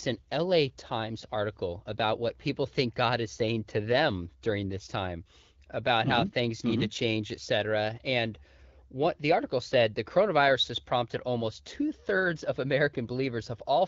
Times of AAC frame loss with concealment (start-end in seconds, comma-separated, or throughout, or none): none